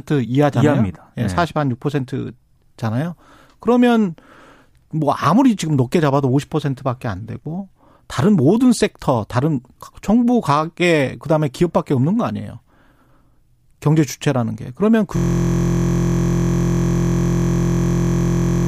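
A speech recording in which the system hangs at 15.17 s: the computer or driver freezes while the sound hardware keeps replaying its ring buffer. This system hang loop repeats one 23.22 ms slice, which fits a 1024-sample buffer, 151 times until the end, producing a steady 43.1 Hz buzz.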